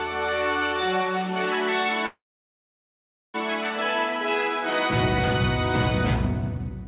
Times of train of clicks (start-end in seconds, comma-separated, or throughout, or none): none